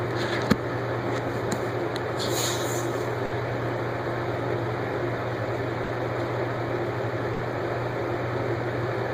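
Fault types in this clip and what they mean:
Burst of packet loss: consecutive packets failed to arrive in time, so the receiver extended the last sound and faded it for about 60 ms before jumping ahead. At 3.25, 5.83 and 7.33 s, a brief fading fill replaces about 60 ms of missing audio.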